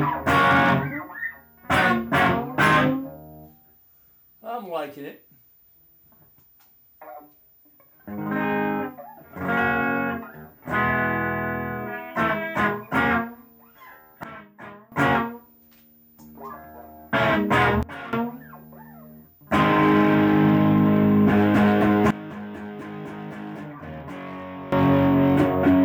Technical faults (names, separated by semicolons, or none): sudden gain jump